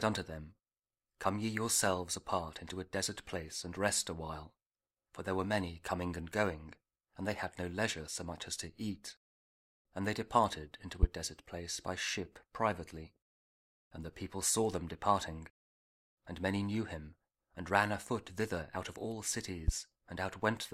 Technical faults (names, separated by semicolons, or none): loud pop